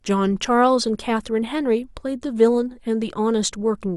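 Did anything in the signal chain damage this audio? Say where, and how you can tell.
No. Nothing in the chain audibly damaged this speech.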